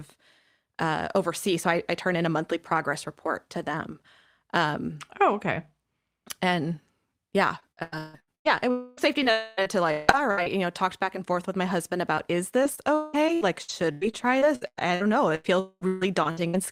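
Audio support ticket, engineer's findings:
Choppy speech at 7.59–8.47 s, ending just before "yeah it". Repeated packet loss (robotic sound): six gaps, longest 154 ms, about 57% of the span concealed. The jitter buffer or decoder keeps extending the last sound into each hole, with pieces missing. Same robotic chop at 8.97–10.47 s, ending before "you know talked back": six gaps, longest 161 ms, about a fifth concealed. Again at 12.63–16.55 s: 17 gaps, longest 177 ms, about 27% concealed.

Sustained buzzy smear at 8.71–9.00 s, right after "yeah it", audio resuming without the lost part. Likely a long network dropout: about 0.26 s never arrived, and concealment stretches the last sound throughout, with no true silence. Repeat at 9.31–9.60 s, again about 0.26 s filled. Another at 15.60–15.84 s, about 0.22 s missing, the extended sound fading to roughly 30 ms of silence before the audio returns.

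Brief smear at 12.15–12.20 s. Short concealed packet loss: about 20 ms missed the decoder deadline. The gap is bridged by continuing the preceding sound, then cross-faded back into the received audio.

Rough, noisy 20 ms patch at 12.17 s, inside the smear above. Lost packet rebuilt from error correction: the following packet carried a low-bitrate Opus in-band FEC copy of the lost one. The decoder played that copy, so there is no gap. The lower bitrate of the copy accounts for the coarser texture.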